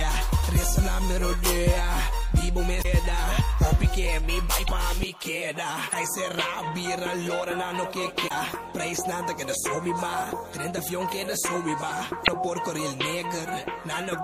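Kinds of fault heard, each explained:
MP3 compression, throughout: the treble is cut off, weak high frequencies flicker on and off between frames into a watery, swirling texture, and attacks smear. This is likely low-bitrate MP3 encoding, which fits around 64 kbps, starving fine detail of bits.
Damaged data in a compressed stream, at 2.81, 4.64, 5.89, 8.27 and 12.24 s: each is a short chirp or blip lasting about 40 to 50 ms, where corrupted frames are misread and the decoder loses sync before locking onto the next valid frame header.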